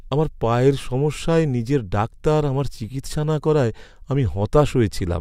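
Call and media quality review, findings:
Listening to the speech in this recording, nothing stood out that would warrant a finding.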